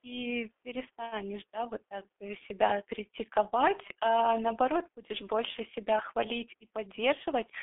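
G.723.1 codec damage runs from start to finish of the speech. The sound is confined to a telephone band of roughly 300 Hz to 3.5 kHz, so it is thin and muffled. The heavy hoarse, buzzy texture fits a bitrate near 6.3 kbit/s. The coder works in 30 ms frames and updates its model of the voice only slowly, so fast consonants smear into their neighbours and lose their edges.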